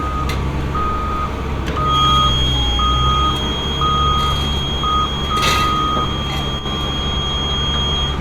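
From 1.83 s to the end, a feedback whistle sits at 3.3 kHz, a few dB under the sound, likely a speaker-to-microphone loop at the edge of feedback. It shows as a thin, unbroken horizontal line on a spectrogram.

From 6.59 to 6.66 s, one channel drops out, likely a lost stereo channel. The mono level dips abruptly by about 6 dB, visible as a brief step down in the waveform envelope.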